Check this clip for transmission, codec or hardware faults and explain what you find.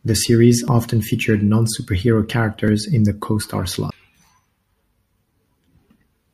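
One fault, a CD skip, at 3.90 s: a brief tick and momentary mute, roughly 10 ms, before the speech resumes abruptly from another spot as the laser jumped tracks.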